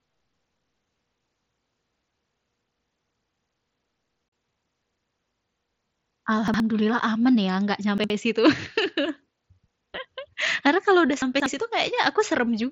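Around 0.84 to 1.02 s you get chunks out of order. A 60 ms piece of the speech turns up about two chunks late, so the speech briefly jumbles, with hard joins where the pieces got spliced back in the wrong sequence.

At 4.29 to 4.32 s there's unconcealed Bluetooth headset packet loss: a 37.5 ms hole with abrupt edges, which fits a handful of lost 7.5 ms mSBC frames replaced by silence rather than patched over. The mSBC link itself is carrying the speech with only light graininess.

The reordering comes back three more times. From 6.48 to 6.6 s, right before "aman ya enggak", a 60 ms chunk lands one slot late. From 7.98 to 8.1 s, just after "aman ya enggak", the same thing happens. The longest is 11.22 to 11.46 s, after "kalau sudah", where a chunk arrives three slots late.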